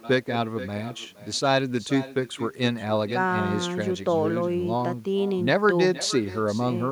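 Nothing on the far end cancels its loudspeaker pickup, so echo with no canceller runs throughout: the speech returns about half a second later, roughly 16 dB quieter, each phrase trailed by a faint, thin copy of itself.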